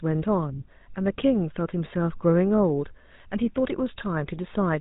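Throughout, the speech has passed through the GSM full-rate codec. It rebuilds the voice from a vocal-tract model driven by sparse, evenly spaced pulses, which fits a 13 kbps rate. The result is plainly buzzy and gravelly, with nothing above 3.8 kHz.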